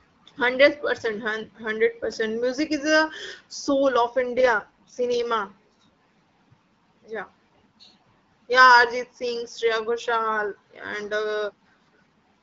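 At 4.20 s, just after "is a soul of", an AMR rate drop makes the speech rougher and more synthetic until 5.25 s, consistent with the codec stepping down from 12.65 to 6.6 kbit/s. Unlike packet loss or a narrowband fallback, there is no gap and the band stays the same.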